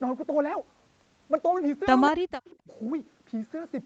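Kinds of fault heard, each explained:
Echo leak: A loudspeaker-side echo canceller likely failed to remove everything its microphone picked up, and the leftover was sent back down the line. The result is a faint, delayed copy of the speech trailing about 190 ms behind the original, sitting roughly 25 to 30 dB below it. It surfaces only in two brief scraps, near 2.06 to 2.1 s and 2.45 to 2.56 s, fragmentary rather than a sustained repeat.
Speech suppressed in double talk: With both ends talking at once, the echo canceller likely couldn't tell the near talker from the loudspeaker echo and clamped down on both. The speech abruptly dips as a result. Just after the first echo fragment, from about 2.11 to 2.33 s, it drops by around 40 dB for roughly a fifth of a second, nearly vanishing. A shorter, shallower dip of about 20 dB follows near 2.64 to 2.69 s.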